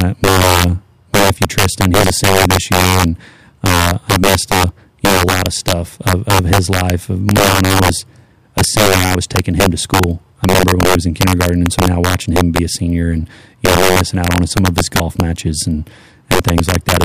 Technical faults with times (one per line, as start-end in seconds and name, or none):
0.00-17.04 integer overflow